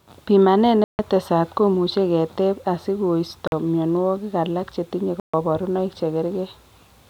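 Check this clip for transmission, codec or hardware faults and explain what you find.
The speech drops out three times, and each gap sounds like a Bluetooth stall. The first runs from 0.84 to 0.99 s, a 149 ms silence before "komuch keteb". The second is 47 ms, 3.47 to 3.52 s, just before "myonwogik alak chetinye". The third is 136 ms, 5.20 to 5.34 s, after that same phrase. The likely cause is radio interference delaying packets until the headphone buffer emptied. Sound stops abruptly, then resumes where it left off.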